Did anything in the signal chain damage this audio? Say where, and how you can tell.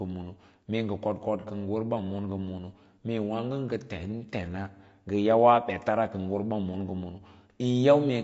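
Yes. At the codec stage, likely low-delay AAC compression throughout: grainy speech, noise filling between harmonics and a synthetic top band, which fits roughly 32 kbps AAC-ELD.

AAC frame loss with concealment at 1.40 to 1.45 s: a smeared, noisy patch where the decoder refilled missing spectrum, visible as a blurred vertical smudge breaking the harmonics.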